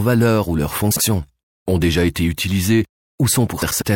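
A speech clip with two cases of frames out of order. Just after "valeur ou leur", from 0.91 to 1.01 s, a short stretch plays with its halves swapped. The same happens from 3.62 to 3.82 s. Each sounds like a garbled flutter. Two neighbouring runs of frames were decoded in the wrong order. The swapped blocks last 48 ms and 96 ms, which points to runs of two and four frames. No time is lost.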